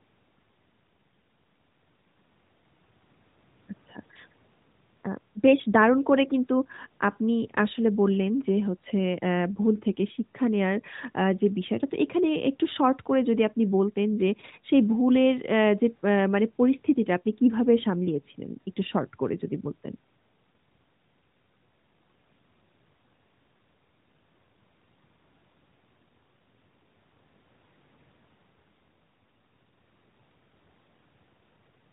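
The speech carries no technical faults; it has passed through the AMR narrowband mobile codec, with nothing above about 3.8 kHz and only light codec colouring that points to the codec's top rate of around 12.2 kbps.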